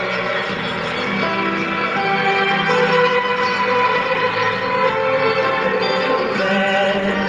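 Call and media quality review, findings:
Nothing to flag here; the audio comes through the call path with the top end rolling off around 12 kHz, as expected for a super-wideband call codec, and no glitches worth a ticket.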